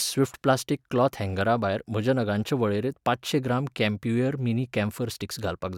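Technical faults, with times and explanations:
No technical faults can be heard in this speech clip. Nothing in the audio marks a point where playback or signal handling goes wrong.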